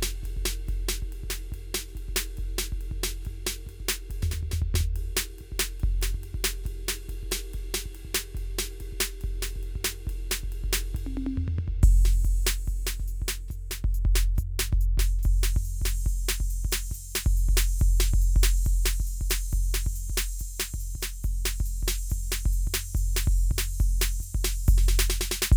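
Nothing in this music stands out as a technical fault, so there's really nothing to flag here.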